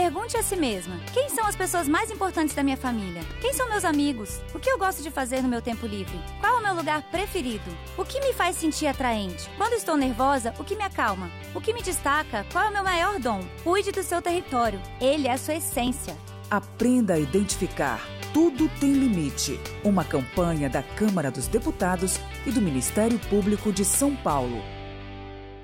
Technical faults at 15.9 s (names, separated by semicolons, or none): repeated buffer